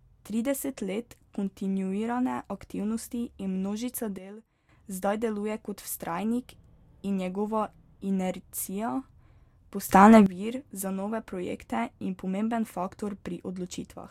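Sudden gain jumps: sound and background noise drop together by about 12 dB from 4.18 to 4.69 s, then rise about 14 dB from 9.89 to 10.26 s, likely from gain settings applied without a ramp.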